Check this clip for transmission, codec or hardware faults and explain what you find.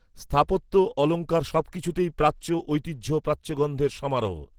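One codec fault runs through the whole recording: Opus compression. The encoder was likely running Opus in its hybrid mode at a low bitrate, which fits a rate around 16 kbps. A speech-oriented layer codes the lower band while a transform layer fills the upper range with sparse, approximate band energy. The damage is plainly audible from start to end: the speech sounds muffled and hoarse, and the upper range turns grainy and rough even though the full bandwidth is kept.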